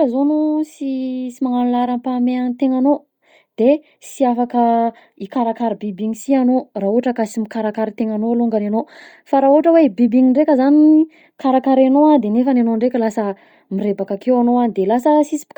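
Throughout, the speech carries a breathy, grainy haze in its upper range, likely from heavy Bluetooth LC3 compression, consistent with about 32 kbps in 10 ms frames.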